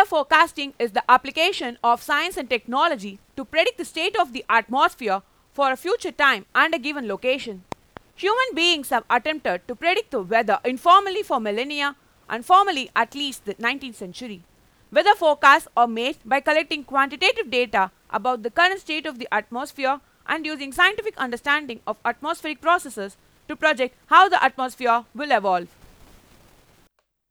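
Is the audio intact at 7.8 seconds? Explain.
No. A loud pop hits between 7.72 and 7.99 s: two sharp thumps, roughly ten decibels above the speech, most likely from a voltage pulse such as a switch or static discharge. Unlike a dropout, the speech carries on uninterrupted beneath the pops.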